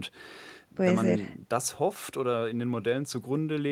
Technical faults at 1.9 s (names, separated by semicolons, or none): none